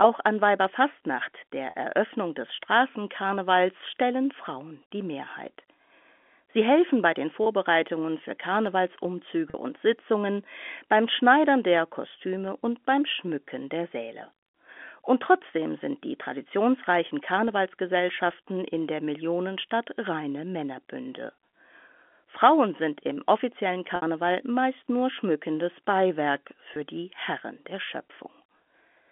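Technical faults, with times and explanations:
1.70–1.74 s, 9.50–9.54 s, 23.96–24.02 s (between "sind im offiziellen" and "meist nur schmückendes") and 26.74–26.76 s, packet loss with pitch repetition: gaps of 40, 40, 60 and 20 ms, consistent with one to three lost 20 ms packets in the telephone-band G.711 stream, were bridged by repeating the last pitch period, so the shorter ones sound like a brief held, buzzy tone, while the 60 ms one fades into silence before the speech returns with a short cross-fade.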